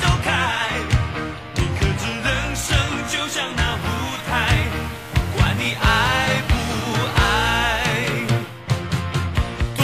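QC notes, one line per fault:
3.54–8.65 s, digital radio blending to analogue: hiss rises to around 25 dB below the signal, and level shifts by about 1 dB. The receiver lost digital reception and cross-faded over roughly 0.3 s to the station's FM broadcast, then back.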